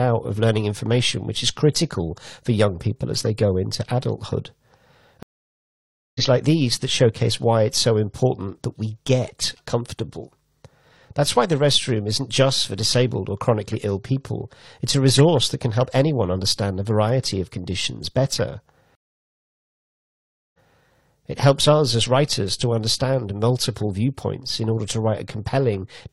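At 5.23 s a stream reconnect silences the speech for 0.93 s. The connection dropped and a fresh decoder resumed roughly half a second further on. A second reconnect at 18.95 s goes silent for 1.59 s, then restarts 0.21 s earlier, repeating a brief stretch.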